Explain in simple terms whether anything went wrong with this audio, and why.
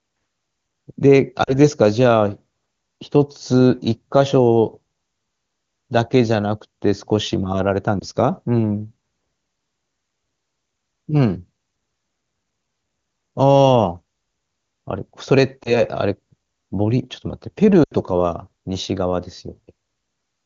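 Four short glitches, all lost AMR speech frames. Radio errors spoiled bits of the signal, so the phone's decoder guessed by stretching the last good sound and fading it. You hear a brief drop toward silence at 1.43–1.55 s, and brief dips or warbles at 8.00–8.04 s and 15.64–15.82 s. The biggest loss, 17.83–17.93 s, sounds like about four frames gone (around 80 ms), so the sound drops to near silence and the voice comes back weak or rough for a moment. The HD Voice codec itself sounds clean between these glitches.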